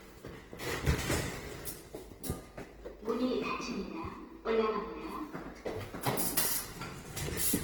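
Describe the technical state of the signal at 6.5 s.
At 6.5 s the sound carries the artefacts of heavy data reduction, with nothing above about 20.2 kHz. This is present for the whole clip, not just that moment. The likely cause is low-bitrate audio saved at a high bitrate: the material points to an earlier Opus encode around 16 kbit/s, later re-saved as a roughly 312 kbit/s MP3. The larger second file cannot restore detail the first codec discarded, so its artefacts remain.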